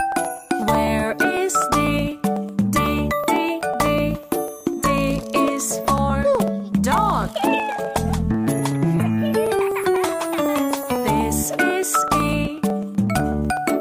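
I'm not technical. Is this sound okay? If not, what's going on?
No. From 0.12 s to 13.7 s there are periodic USB or driver dropouts: every 0.125 s, roughly eight times a second, a tiny slice of sound, about half a millisecond, is skipped. This produces a steady ticking whenever sound is playing.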